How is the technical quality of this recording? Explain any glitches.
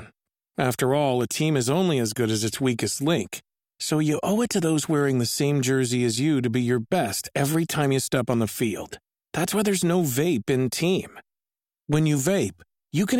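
A single glitch stands out in the speech: one sharp click at 1.21 s, just before "a team is only". It is most likely dropped samples. A tiny stretch of the stream, a fraction of a millisecond, went missing, so the waveform jumps straight from one value to a later one. That step is heard as a click and shows as a thin vertical line across the spectrum. Unlike a dropout, no sound goes silent or disappears, because the gap is far too short to remove anything audible.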